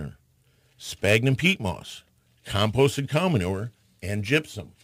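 Speech with crude rate conversion throughout. It sounds gritty, with an inharmonic fizz that tracks the louder and brighter sounds. Samples are repeated without filtering, likely about one in eleven, which points to a 44.1 kHz to 48 kHz change. The error sits roughly 25 dB down.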